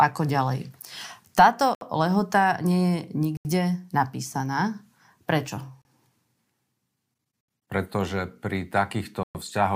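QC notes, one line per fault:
1.75 to 9.35 s, Bluetooth stalls: the speech drops to silence at 1.75 s for 64 ms, 3.37 s for 80 ms, 5.82 s for 33 ms, 7.41 s for 75 ms and 9.23 s for 116 ms, then resumes. This is likely a wireless link briefly starving the receiver's buffer.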